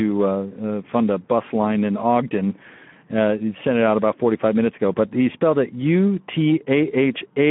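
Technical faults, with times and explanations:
Throughout, Speex codec: a low-rate CELP encode, which fits roughly 11 kbps, leaves too few bits for the excitation, so the speech sounds noisy and hoarse. It is confined to a 150 Hz to 3.4 kHz band, with nothing above 3.8 kHz.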